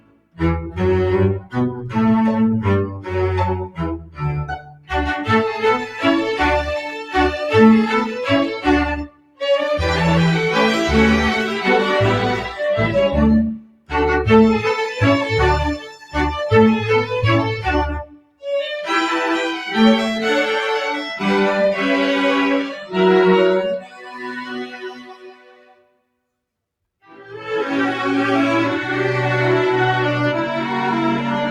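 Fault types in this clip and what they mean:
Noise suppressor applied to music or sounds: a speech-oriented noise suppressor stays active across the whole clip. It treats sustained, steady material as background and keeps pulling it down, so the level swings by around 15 dB as held sound sinks and fresh attacks jump back up. Unlike a compressor or gate, the movement follows how steady the sound is rather than how loud it is, which gives a pumping, fluttering, thinned texture.
Sound cut by the noise suppressor: specific passages where the suppressor pushes the sound down harder than elsewhere, at 0.0–0.41 s, 1.4–1.91 s, 2.88–4.92 s, 9.05–9.42 s, 13.55–13.93 s, 15.78–16.15 s, 18.04–18.45 s and 22.8–27.46 s. Most drops reach about 21 dB, with the one near 16 s about 12 dB. The longest stretches sink for a few seconds in total. Unlike a dropout, the sound fades and decays are cut short instead of going silent, while sudden onsets still come through.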